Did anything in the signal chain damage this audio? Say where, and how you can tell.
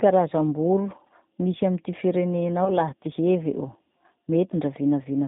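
Yes. At the codec stage, the whole clip has the narrow, slightly rough and synthetic sound of G.729 speech coding, with nothing above 4 kHz, consistent with its 8 kbit/s rate.

At the network stage, VoIP packet loss concealed by the speech codec occurs from 2.65 to 2.72 s, just before "laha ty hevy o". The decoder extrapolates from its last pitch and filter with fading gain, which fits a single lost 10 ms frame.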